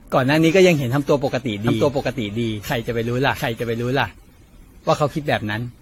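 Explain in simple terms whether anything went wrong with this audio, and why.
Two things went wrong. The first is generation loss, and it runs through the whole speech clip. The sound is swirly, smeared and hollow. Sharp starts of sounds are blurred, and nothing is left above 16.5 kHz. The likely cause is that the audio was squeezed into a small compressed file over and over, about ten times. Each round throws away a little more and adds its own noise, and the damage piles up.

The second is a doubled audio track, from 1.67 s to 4.11 s. In that stretch a second copy of the same speech plays 0.7 s behind the first, at roughly the same loudness. It is a clean copy with no echo or room sound. It cuts in and out abruptly at those times. This likely comes from the same sound being recorded twice through two paths, one slower than the other.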